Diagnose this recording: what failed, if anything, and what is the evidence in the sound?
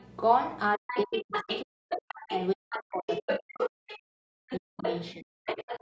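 A steady low tone sits under the speech for the whole clip, pitched at 60 Hz with a few low harmonics and roughly 25 dB below the speech. This is mains hum, introduced in the analogue wiring before the converter. A ground loop or a nearby transformer is coupling the 60 Hz power line into the signal path. The call's microphone processing, which passes nothing above 8 kHz, does not remove it.

A second voice comes through in several stretches: a faint scrap from 0.0 to 0.08 s, far below the speech, then much stronger passages from 0.88 to 2.32 s, 2.7 to 3.99 s, 4.48 to 5.06 s, and 5.45 s to the end. In those later passages it is only slightly quieter than the talker. This is the other side's voice leaking through. The likely cause is the talker's loudspeaker playing the far end into the microphone, with the echo canceller failing to remove it in the call processing.

From 0.75 to 5.47 s the talker's own speech keeps dipping and breaking up while the other side is talking, with drops of up to about 40 dB and roughly four seconds affected in total. 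This is speech suppressed in double talk. The likely cause is the call's echo canceller being unable to separate the local talker from the loudspeaker echo while both sides spoke, so it turned down everything the microphone picked up.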